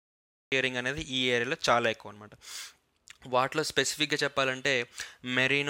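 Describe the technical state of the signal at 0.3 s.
The recording began late, a cut-off start: from 0.0 to 0.52 s the signal is digital silence, then sound enters abruptly mid-event with no natural attack.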